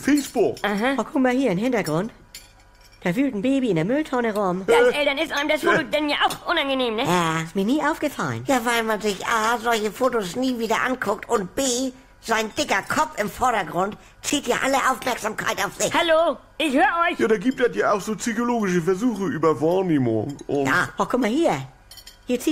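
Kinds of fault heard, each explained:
Gap between stream segments: three brief dropouts to silence with abrupt edges break the sound at 5.28 s, 6.29 s and 14.30 s, each roughly 8 to 11 ms long. They fall on boundaries of what look like 1-second stream segments, where the timestamps of adjacent segments do not quite meet and the player pads the hole with silence. Nothing is removed from the audio; each gap simply inserts a short pause, shifting later material slightly.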